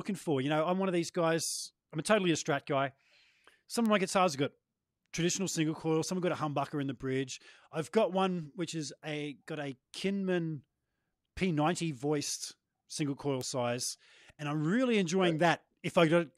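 At 3.86 s, just before "of my guitars have", and again at 13.41 s, between "voiced single coil" and "size and I'm really", a single-sample bit error spike reaches about -18 dBFS. One flipped bit throws the value by a power of two and back instantly, giving a broadband tick unrelated to the speech, unlike a splice click, which marks a waveform discontinuity.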